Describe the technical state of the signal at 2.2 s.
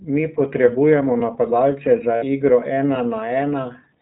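Just after "potrebujemo napadalce za", from 2.16 to 2.25 s, the speech gives way to a held, faintly buzzy, breathy vowel. These are lost iLBC frames: the decoder repeated the last pitch cycle with added noise to cover the gap. The 60 ms gap fits three missing 20 ms frames, and the voice is right again almost at once.

Around that gap the iLBC codec itself is plainly audible. The speech is clear but rough and synthetic, with nothing above 4 kHz. Its 20 ms framing points to the 15.2 kbps mode, coding each frame's excitation independently.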